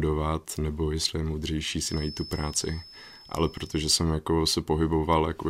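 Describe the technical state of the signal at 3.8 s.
At 3.8 s a thin, steady whistle near 5.2 kHz sits behind the speech, some 20 dB below it and swelling and fading slowly in level. It is a feedback whistle that runs from 1.75 s to 4.05 s, so it is still present at this moment. The likely cause is the loudspeaker-to-microphone loop sitting right at the edge of feedback, where that single high frequency keeps recirculating without building into a runaway howl.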